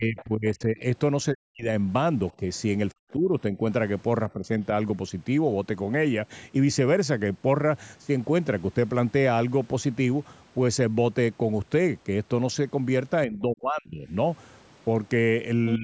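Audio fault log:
0.0–0.85 s, 1.31–1.69 s, 2.38–2.43 s, 2.93–3.62 s, 4.29–4.6 s, 13.26–14.13 s, 15.76–15.83 s: speech suppressed in double talk. The talker's level sags in these spans, from a slight dip of around 5 dB at 2.38 s to near-dropouts of around 40 dB at 1.31 s and 2.93 s, and roughly 25 dB over 13.26–14.13 s. This is likely an echo canceller that could not separate near speech from far-end echo during overlap and attenuated both.
0.17–0.24 s: other side's voice leaking through. A brief scrap of a second voice sits about 20 dB under the main speech, inside the first suppressed span. It is likely loudspeaker playback of the far end that the echo canceller did not fully subtract from the microphone signal, so a short residual fragment reaches the output.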